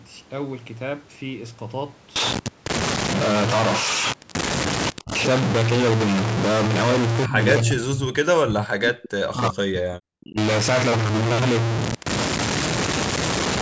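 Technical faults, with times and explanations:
5.02 to 10.38 s, speech suppressed in double talk: the speech level drops sharply three times, briefly at 5.02 s (about 15 dB down) and 7.26 s (about 25 dB), then for nearly three seconds from 7.62 s, where it falls by about 40 dB. This is likely an echo canceller mistaking near-end speech for loudspeaker echo while the far side talked, and attenuating everything. The band-limiting to 8 kHz from the call processing is unrelated.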